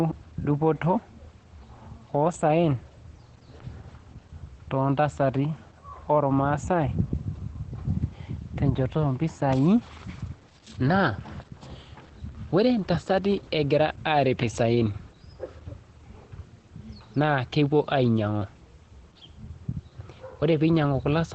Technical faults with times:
0.00-21.35 Opus voice compression

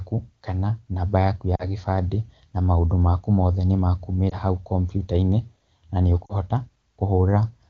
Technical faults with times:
1.55-1.66 lost AMR speech frames
4.30-4.38 lost AMR speech frames
6.26-6.34 lost AMR speech frames

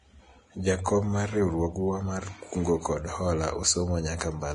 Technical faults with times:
0.00-4.54 Vorbis compression

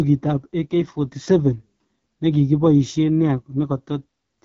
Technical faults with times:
0.00-4.44 AMR wideband (HD Voice) codec

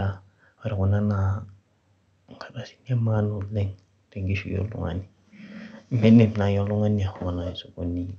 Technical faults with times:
none

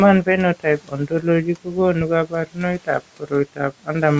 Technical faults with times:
0.60-1.77 speech cut by the noise suppressor
2.01-2.08 phantom power thump
2.26-2.62 speech cut by the noise suppressor
3.56-3.89 speech cut by the noise suppressor

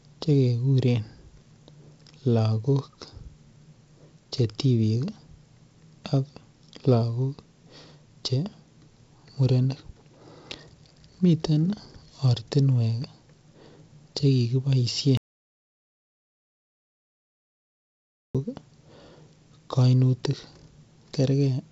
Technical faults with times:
15.17-18.35 audio dropout to silence

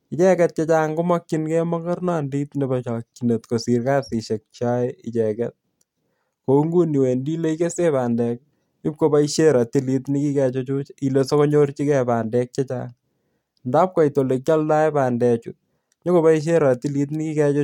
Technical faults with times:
none

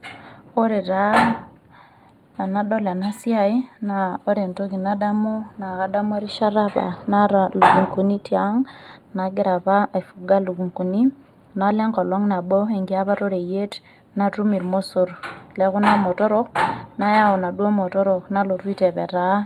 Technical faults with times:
0.00-19.46 channel delay (comb filtering)

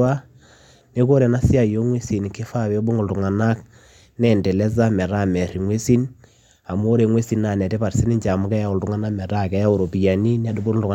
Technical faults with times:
none

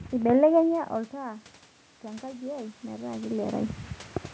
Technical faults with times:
2.01-3.62 automatic gain rising

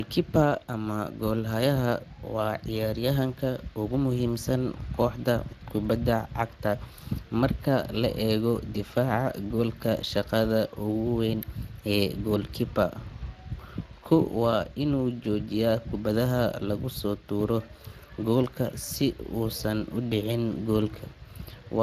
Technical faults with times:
0.00-21.83 Speex codec

